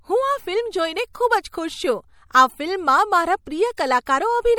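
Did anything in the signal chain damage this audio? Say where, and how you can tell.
Yes. MP3 compression damage runs through the whole speech clip, likely from the codec stage. Bandwidth reaches 20.6 kHz, yet plainly audible watery swirl and metallic chirps on s sounds remain: weak frequency lines are zeroed and flicker between frames, which fits a low bitrate near 64 kbps.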